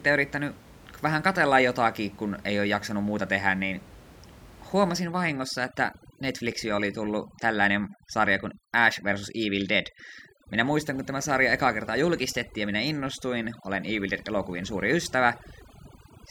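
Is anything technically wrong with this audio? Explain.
Yes, there's overdone noise removal from about 5.02 s right through to the end. Up to that point you can hear the room noise sitting about 21 dB under the speech. After that, a noise reducer that's set far too hard kicks in, killing any frequency band that gets close to its noise estimate, and it takes the quieter parts of the voice along with the background noise. So the background drops and breaks up into little twinkling, warbling specks.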